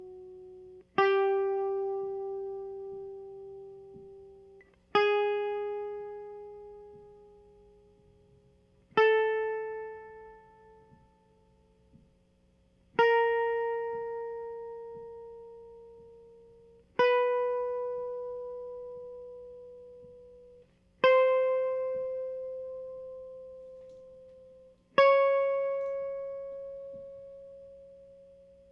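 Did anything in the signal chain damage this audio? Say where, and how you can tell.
No, nothing in the chain audibly damaged this music at any stage.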